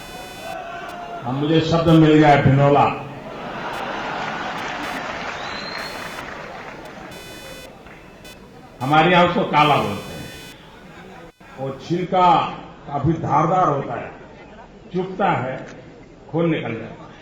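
From the start to 12.05 s there is computer activity noise: a buzzing, chirping texture pulsing at around 500 Hz, roughly 25 dB below the wanted sound. Processor or peripheral load changes are disturbing the shared ground, so the noise follows machine activity rather than the audio.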